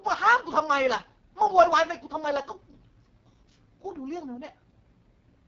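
From start to finish the speech carries heavy AMR wideband (HD Voice) codec damage, with the rough, raspy texture that points to the codec's lowest mode, around 6.6 kbit/s. The speech model rebuilds the voice from sparse pulses through a vocal tract filter, so it sounds grainy and buzzy. On a spectrogram, harmonics look smeared and patchy below 6.4 kHz, with a thin noise band above that and nothing at all above 7.4 kHz.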